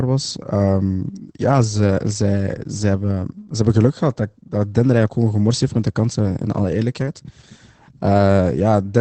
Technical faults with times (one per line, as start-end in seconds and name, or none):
0.00-9.01 Opus voice compression